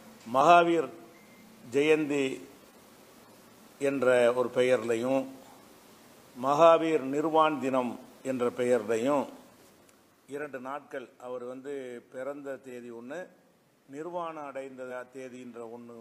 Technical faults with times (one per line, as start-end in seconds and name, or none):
14.86-14.91 compressed frames skipped